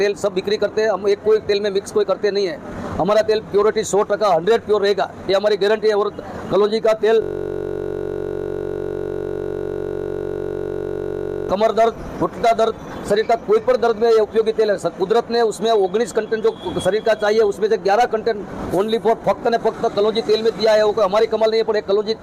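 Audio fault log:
7.22–11.49 s, system hang loop: the machine or its audio driver stalled, but the sound hardware kept replaying the same ring buffer, so one 21.33 ms slice of audio repeats exactly, about 200 times, for roughly four seconds. Because the slice is so short, it doesn't stutter. It fuses into a steady buzz at about 46.9 Hz, the loop rate, which fits a 1024-sample buffer. Normal audio picks back up at 11.49 s.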